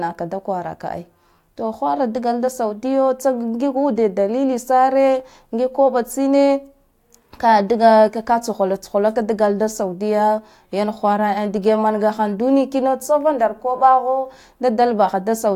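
Nothing in the recording stood out as a technical problem on listening.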